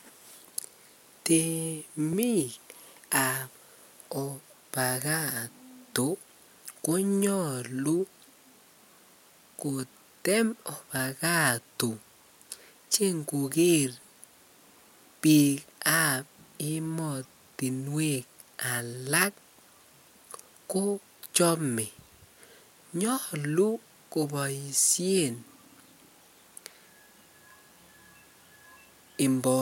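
At 2.13 s the speech drops out for only 0.73 ms, a block of digital silence short enough to be heard as a tick rather than as a gap. Either the program failed to fill its output buffer in time or a calculation produced invalid values, and the abrupt cut out and back leaves a hard break. On a waveform it shows as a tiny flat notch; on a spectrogram, as a thin vertical line spanning the frequency range.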